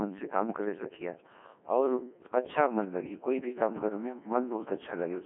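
Robotic, buzzy speech runs from start to finish, with no energy above 3.6 kHz and a narrow telephone-like band of roughly 200 Hz to 3.4 kHz. This is the Codec 2 vocoder: heavy damage, consistent with about 1.6 kbit/s, rebuilding the voice from pitch and envelope as sine waves.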